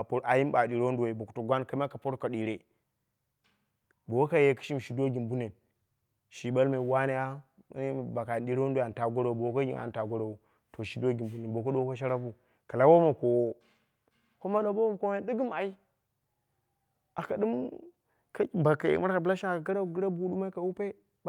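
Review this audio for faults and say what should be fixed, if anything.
No faults; nothing needs fixing.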